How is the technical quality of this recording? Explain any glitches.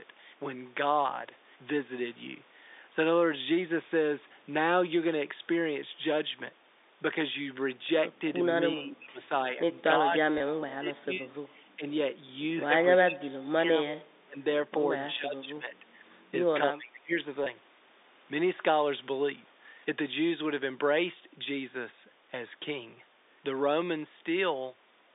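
The recording has two kinds of fault, heard through a telephone band of roughly 250 Hz to 3.7 kHz.

From 8.72 to 9.3 s, 9.52 to 9.6 s, 9.98 to 11.32 s, 11.76 to 11.85 s, 12.99 to 13.89 s, 14.24 to 14.37 s, 15.1 to 15.84 s and 16.72 to 17.13 s, the speech dips by about 5 to 35 dB. This is likely speech suppressed in double talk: the echo canceller mistook talker for loudspeaker echo. The dips follow overlapping talk, unlike steady dropouts.

At 10.38 s and 17.44 s, one 20 ms packet is lost in each case. Packet loss with pitch repetition bridges each gap with a briefly held, buzzy repeat rather than silence.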